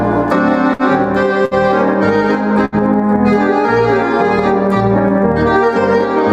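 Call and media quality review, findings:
Burst of packet loss, three spots: 0.73–0.82 s, 1.45–1.54 s, 2.65–2.75 s. Receiver concealment stretches the last sound into a fading buzz/hiss for roughly 60–70 ms, then the sound jumps ahead with about 60 ms gone. Looks like network drops or late packets.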